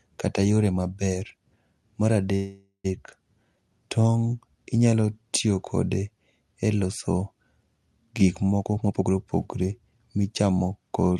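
At 2.35 s the speech stalls into a fading buzz and brief silence until 2.86 s, a call audio freeze, likely from delayed packets draining the jitter buffer. From 8.58 to 10.51 s the speech hurries at 125% with unchanged pitch: a jitter buffer speed-up trimming about half a second of pitch periods.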